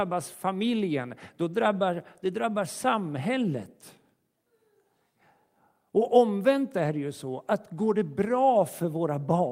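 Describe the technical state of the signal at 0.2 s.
At 0.2 s the signal is intact, with no audible fault at that point.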